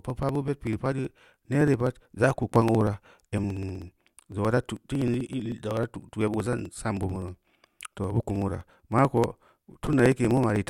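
From 0.10 s to 10.62 s the speech carries periodic USB or driver dropouts: every 0.063 s roughly a millisecond of audio is skipped, causing a steady ticking during speech. A waveform shows small regular discontinuities; a spectrogram shows evenly spaced vertical lines.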